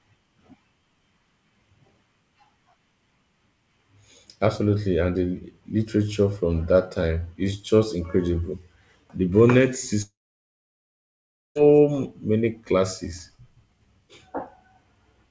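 At 10.02 s the speech drops out until 11.57 s. The last sound trails off as a short fading buzz or hiss, then there's about 1.4 s of silence, and it picks up further on with roughly 1.5 s simply gone. That's likely a long network dropout.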